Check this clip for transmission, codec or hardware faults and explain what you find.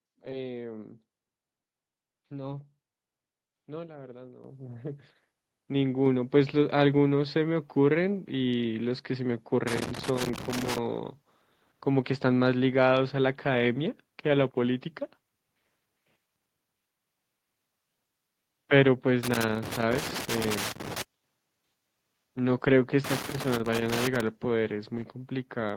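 Two hardware-side faults are present: the microphone input level is raised twice in quick succession, and three bursts of loose connector crackle appear later in the speech.

Microphone volume stepped up, at 4.44 s and again at 6.06 s. The calling software judged the microphone too quiet and raised the device's input volume in discrete jumps, first by about 8 dB and then by about 4 dB. Because the change happens at the input, voice and background noise both become louder at the same instant, with no gradual ramp.

Loose connector crackle, from 9.68 to 10.78 s, 19.23 to 21.02 s, and 23.04 to 24.21 s. A worn or dirty contact is intermittently opening and closing, chopping the signal many times over each burst and adding pops wherever DC sits on the line. Each episode lasts roughly one to two seconds and is heard as irregular scratchy crackle over the speech.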